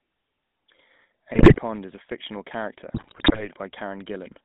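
GSM full-rate codec coding runs through the whole speech clip. The voice is squeezed into a phone band of roughly 150 Hz to 3.6 kHz and carries the gravelly, buzzy roughness of a coder that models the vocal tract and excites it with sparse, regularly spaced pulses, consistent with the 13 kbps full-rate standard. GSM bit errors strike from 1.34 to 1.6 s and again from 2.94 to 3.48 s. Corrupted filter, pitch and gain parameters reach the decoder, so frames come out spectrally warped or suddenly loud, and the voice breaks into squawks, pops and gargling. The first burst has the higher error rate, about 10% against 4.8%.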